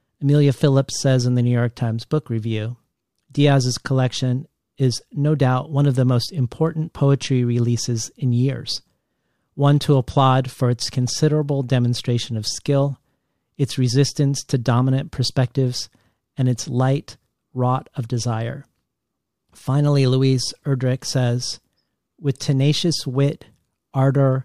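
A speech recording, and nothing is technically wrong with it.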